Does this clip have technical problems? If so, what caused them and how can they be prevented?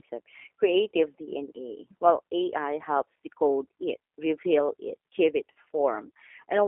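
Yes. The G.729 codec compresses the speech throughout to 8 kbit/s, modelling it as filtered pulses within a 300 to 3400 Hz line band, which leaves it muffled, rough and synthetic. Using a wideband codec such as G.722 or Opus at a higher bitrate would avoid this.

VoIP packet loss concealed by the speech codec occurs at 5.56 s, just after "reveal it give it." About 40 ms of audio, consistent with two lost packets, was extrapolated by the decoder, producing a brief, fading smear. Forward error correction, a larger jitter buffer or a more reliable network path would prevent this.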